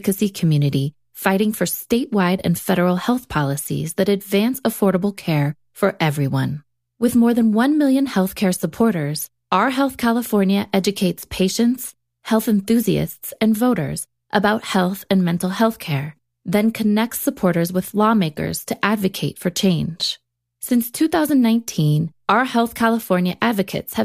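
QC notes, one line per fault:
No faults heard in review.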